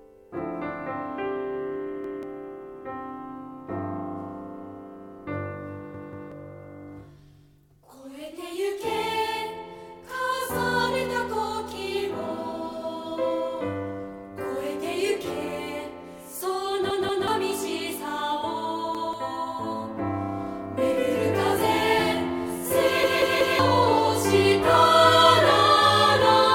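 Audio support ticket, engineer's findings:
Repeated buffer, five times. Same 186 ms chunk plays again with a hard join each time. 2.04–2.23 s, one repeat. 5.94–6.32 s, two repeats. 16.90–17.28 s, two repeats. 18.95–19.13 s, one repeat. 23.03–23.59 s, three repeats. Heard as a stutter. Underrun at the output device: audio arrived late, so the last buffer was replayed. Length fits an 8192-sample buffer. Roughly 0.2 to 0.5 s of sound lost per event.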